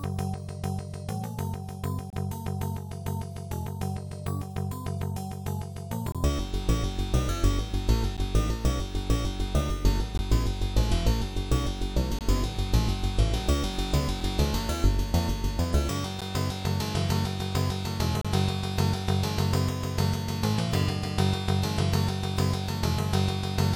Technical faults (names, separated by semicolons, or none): gap between stream segments